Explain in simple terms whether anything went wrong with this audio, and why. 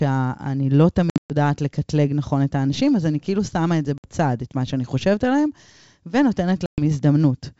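Packet loss on an ADPCM call causes three hard gaps in the speech: about 1.10–1.33 s (broken, mostly missing), 3.98–4.04 s, and 6.66–6.81 s. Each gap is silent, then the sound returns slightly distorted until the decoder catches up.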